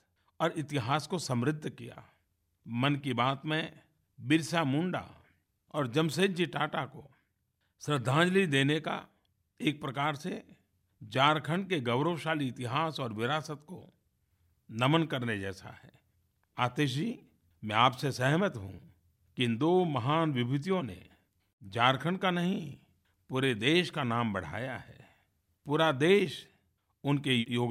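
Nothing in the recording stood out as a technical problem on listening.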